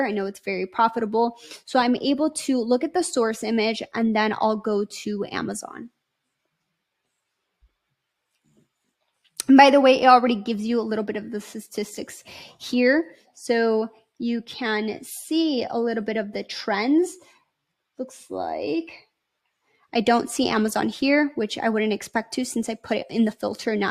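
No technical fault can be heard anywhere in the audio, and the signal holds steady throughout without any interruption or disturbance.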